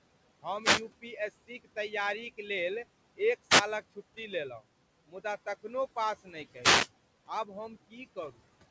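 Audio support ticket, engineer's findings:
Wireless microphone noise hits at 0.61–0.82 s, 3.49–3.62 s and 6.60–6.89 s. Probable component: analogue FM radio link. Multipath reflections cancel the carrier, receiver noise climbs through the fade, and the deeper dips break into clicks. Audible as short swishes or bursts of static lasting roughly 0.1 to 0.3 s, briefly masking the speech, riding over room noise sitting about 20 dB under the voice.

Speech cut by the noise suppressor at 6.23–6.35 s. Probable component: noise suppression stage misclassifying low-level speech as background. Gain pulled down by about 16 dB for about a tenth of a second. Result: a soft consonant or word ending swallowed along with the noise floor, sounding faint or clipped off. Sits just ahead of the third RF hit. Band stops at 8 kHz, consistent with a 64 kbit/s G.722 call path.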